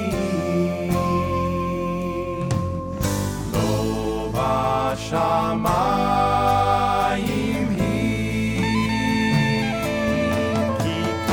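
No technical faults can be heard anywhere in the audio.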